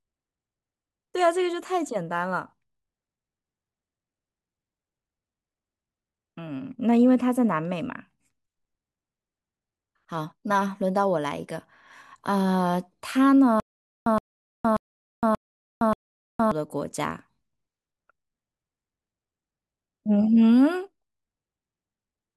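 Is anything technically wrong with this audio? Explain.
Yes. Stutter with silent gaps, from 13.6 to 16.52 s: a 120 ms fragment of the speech repeats five times, each followed by about 463 ms of digital silence, every 583 ms. This likely comes from a stalled stream replaying its last buffer, so the speech from that stretch is lost.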